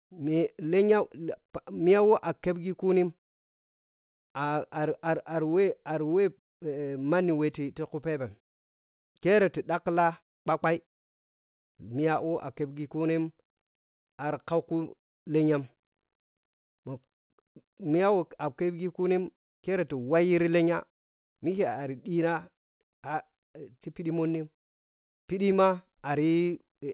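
No technical faults can be heard in this speech recording.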